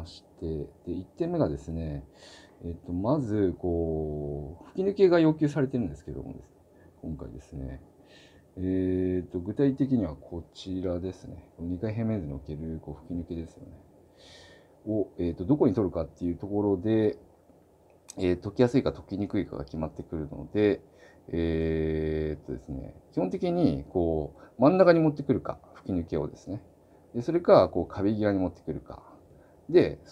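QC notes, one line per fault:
5.54 s underrun with held sample: the output buffer briefly ran dry and the converter held its last value for 2.9 ms (128 samples), so the waveform sits flat rather than dropping to silence. Unlike a zero-filled dropout, the stop carries little or no click. Essentially no audio was lost, so playback picks up where it halted and the join back is soft.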